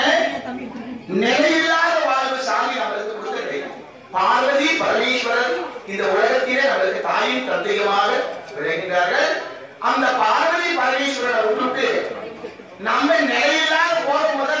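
Nothing in the audio stands out as a technical fault; it holds together without any glitch worth pointing to.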